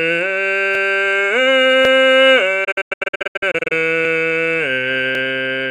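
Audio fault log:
0.75–0.85 s, 1.85–1.95 s and 5.15–5.25 s, overlapping chunks: At each of these joins the music hiccups with a brief stutter, as a 100 ms slice plays a second time before the music moves on. The audio was handled in blocks of about one second, and each new block started 100 ms before the previous one finished, so the tail of one block repeats at the head of the next. The repeat lands on the block boundary each time.
2.64–3.72 s, digital broadcast dropout: The music breaks up into a string of short silent holes, the longest about 96 ms, scattered across roughly 960 ms, with about 528 ms of audio missing in total. Each hole opens and closes with a quick 8 ms fade rather than a hard click. The receiver lost the signal or rejected corrupted frames and muted until clean frames returned, which fits some twenty-odd lost frames. The music that was sent during those gaps is gone.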